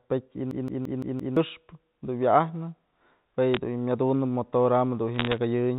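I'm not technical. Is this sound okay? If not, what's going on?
No. A system hang loop runs from 0.51 to 1.37 s: the computer briefly froze while the sound hardware kept replaying the same 0.17-second scrap of speech, five times over, so you hear a rapid stutter about six times a second and roughly a second of real speech is lost.

Bit errors on a digital phone line come at 3.54 to 3.57 s and again at 5.16 to 5.38 s. Flipped bits in the digital telephone signal each spoil a single sample, which comes out as sharp ticks and a brief crackle laid over the speech.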